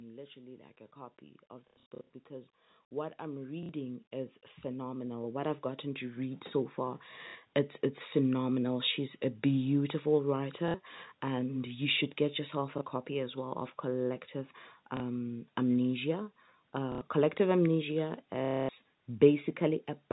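A speech recording whose level is pulled upward twice by automatic gain rising. Gain climbs about 5 dB from 0.33 to 2.59 s, then about 15 dB from 3.17 to 6.82 s. In each stretch the control judged the input too quiet and raised its gain gradually, so the voice and the background noise behind it swell together over a few seconds rather than the talker simply getting louder.

Packet loss with last packet repeated occurs at 1.68 to 2.09 s, 3.63 s, 7.29 s (just before "it's it's phenomenal"), 10.68 s (between "a beautiful" and "and you should get"), 12.78 s (between "you should get yourself" and "copy as well of"), 14.97 s, 16.92 to 17.01 s and 18.45 to 18.69 s. The first burst scatters about 270 ms of loss over 420 ms. The last burst is a 240 ms run. Each gap is filled by replaying the previous packet, which ignores pitch period, so longer runs give a robotic buzz near 33 Hz, which fits 30 ms packets.

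The audio passes through G.711 telephone coding, so nothing above 4 kHz is present.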